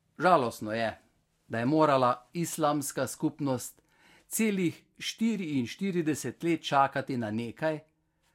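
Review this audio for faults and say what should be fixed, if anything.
The decoder skipped compressed frames at about 6.95 s in this speech: a couple of whole frames were either missing from the stream or rejected as damaged, so playback jumped ahead rather than decoding them. Only a few milliseconds of audio vanish. To prevent it, protect the encoded file or stream against corruption and truncation.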